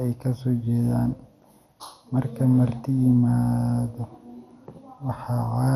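Throughout the speech, the sound is dulled and carries a gurgling, granular roughness, with nothing above 14.3 kHz. This is likely MP2 compression: starved of bits, the encoder shuts off upper sub-bands and coarsely quantises the rest, which fits a rate near 64 kbps.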